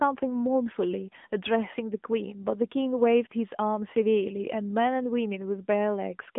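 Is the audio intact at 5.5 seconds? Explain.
No. At 5.5 s the speech is still passing through the AMR narrowband mobile codec, which affects the whole clip. The signal is sampled for an 8 kHz system and rebuilt from a vocal-tract model excited by a few pulses per subframe, so nothing above 3.8 kHz survives and the usable band sits roughly between 200 Hz and 3.5 kHz. The codec damage is plainly audible as a thin, buzzy, synthetic quality, consistent with a mid-range rate around 10.2 kbps.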